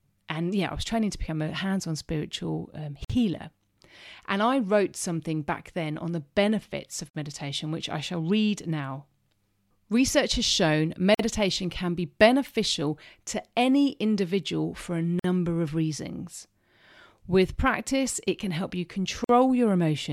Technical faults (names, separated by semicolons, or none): gap at a join of encoded pieces